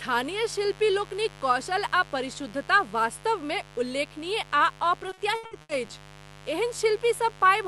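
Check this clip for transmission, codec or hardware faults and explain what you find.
Two faults are present: a constant mains buzz and a burst of repeated packet loss, carried over an Opus-style call path with a 12 kHz bandwidth limit.

The mains buzz runs throughout, at 50 Hz and roughly 20 dB below the speech. Sharp switching spikes produce harmonics up into the kilohertz range, which is why it sounds raspy rather than a pure hum.

Repeated packet loss (robotic sound) occurs from 5.09 to 5.91 s. Around six gaps, the longest 80 ms, were each patched by extending the previous sound, concealing about 37% of that stretch and leaving it choppy with pieces missing.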